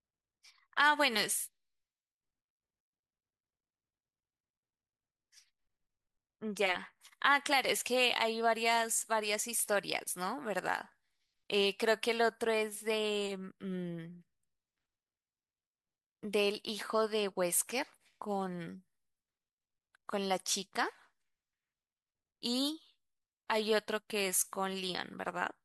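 No technical faults can be heard anywhere in this speech recording. There are no events to place in time.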